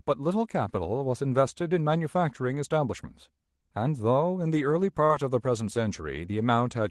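Between 5.05 and 5.11 s there is a short concealed packet loss. About 40 ms of the speech failed to reach the decoder in time. The receiver covered the gap with 39 ms of synthesised continuation, extending the sound that came just before and then blending back into the real signal. At that moment the speech briefly smears: a stand-in copy of the previous sound takes over for a fraction of a second before the original returns.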